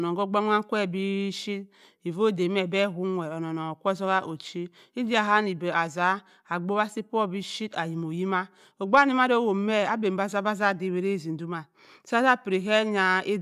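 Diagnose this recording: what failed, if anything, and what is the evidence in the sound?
Nothing failed in this recording, and the sound gives no evidence of any fault.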